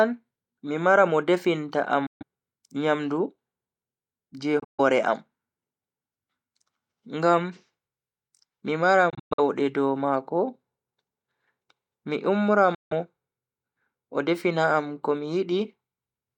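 Bluetooth dropouts at 2.06 s (just after "definta am"), 4.59 s, 9.10 s and 12.75 s, each about 0.14 to 0.21 s. They are likely late, discarded wireless packets, which leave abrupt silent gaps before the speech resumes further on.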